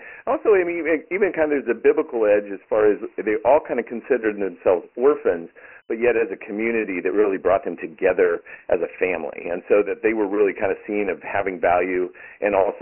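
Throughout the speech, the audio was encoded with Dialogic VOX ADPCM, whose coarse 4-bit steps fit a 24 kbps, 6,000-sample-per-second stream. Nothing survives above 3.1 kHz, the lows thin out below 300 Hz, and heavy gritty hiss trails every phrase.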